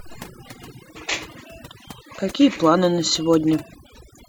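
Overdone noise removal runs the whole way through: the denoiser bites too hard, killing bands near its noise estimate, so the background twinkles.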